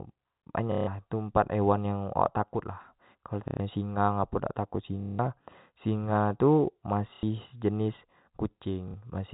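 Packet loss with the last packet repeated: the receiver replayed stale audio at 0.72–0.87, 3.48–3.6, 5.01–5.19, 7.14–7.23 and 8.88–8.94 s, buzzing briefly near 33 Hz, consistent with 30 ms packets, through the narrowband G.711 telephone sound.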